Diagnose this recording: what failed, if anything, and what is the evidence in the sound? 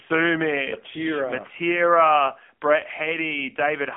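Codec stage: an AMR narrowband mobile codec throughout, passing only 200 Hz to 3.4 kHz with nothing above 3.6 kHz. The buzzy, synthetic speech, unlike a plain filter's, points to a mode near 8 kbps.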